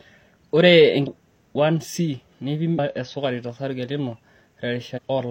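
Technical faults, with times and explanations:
1.03–1.08 s, 2.74–2.79 s and 4.93–4.99 s: damaged data in a compressed stream. Three brief blips of about 50 to 65 ms break into the speech. Corrupted bytes in the encoded stream make the decoder misinterpret those frames or discard them. It then loses its place and hunts for the next valid frame header, so the output is disrupted until sync returns.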